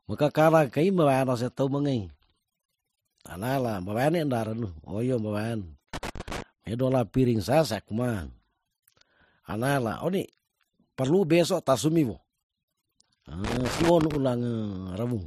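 Irregular bursts of scratchy crackle break through the speech from 5.94 to 6.42 s and again from 13.44 to 14.16 s. This is loose connector crackle: a worn or dirty contact repeatedly making and losing connection, chopping the signal into rough fragments.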